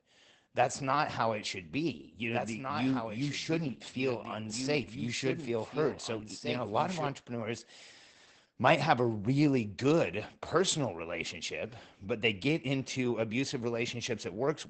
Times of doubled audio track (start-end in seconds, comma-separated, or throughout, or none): 2.33-7.07